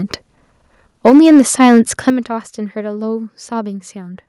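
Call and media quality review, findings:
Microphone overload, 1.05–1.8 s and 2.07–2.1 s: harsh crackle on loudest speech peaks, tops flattened by about 3–4 dB over full scale, around a tenth of samples clipped. Likely input gain set too high for the converter.

Microphone volume stepped down at 1.1 s (about 3 dB) and 2.1 s (about 10 dB): abrupt level drop right after clipped peaks. Likely call software automatic gain control cutting device input volume.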